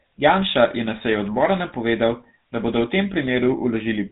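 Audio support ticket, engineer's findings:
GSM full-rate codec damage throughout the speech, plainly audible: buzzy, gravelly roughness, nothing above 4 kHz. The regular-pulse excitation, thinned to every third sample, sounds like a 13 kbps GSM link. Clean narrowband filtering would sound dull but smooth, not rough.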